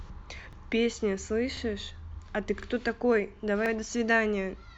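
The clip is speech with overlapping chunks. A 44 ms stretch replays at 0.53, 1.57, 2.62 and 3.66 s. Each 1.0 s chunk begins 44 ms before the previous one ended. So every join repeats audio, heard as a brief, regular stutter.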